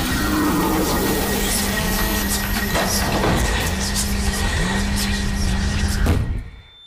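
From 1.73 s to 2.23 s a hard, raspy GSM phone buzz cuts in, about 8 dB below the sound itself. A nearby 2G handset is sending data in short bursts about 217 times a second, and the audio circuitry rectifies each radio pulse into a click, producing a buzz rich in harmonics. Unlike mains hum, which is smoother and sits at 50 or 60 Hz, this is harsher, and its abrupt half-second stop points to intermittent data traffic rather than a steady call.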